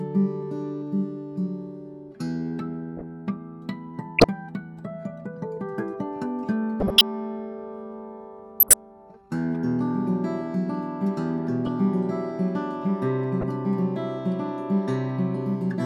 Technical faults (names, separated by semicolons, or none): corrupt frame decoded